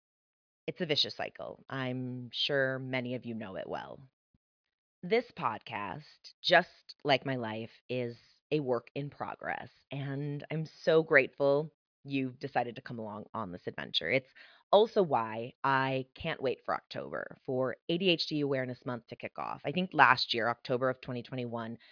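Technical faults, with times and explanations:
No technical faults detected.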